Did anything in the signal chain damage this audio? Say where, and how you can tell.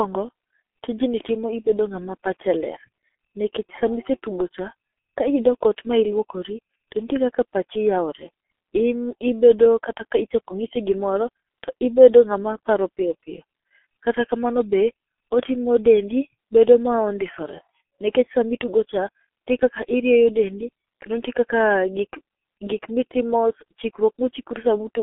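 Yes, at the codec stage: the whole clip went through G.723.1. Speech is band-limited to roughly 250 Hz to 3.4 kHz, sounds heavily muffled and hoarse, and consonants smear because the slow, frame-based voice model can't track them. The damage fits a bitrate around 6.3 kbit/s.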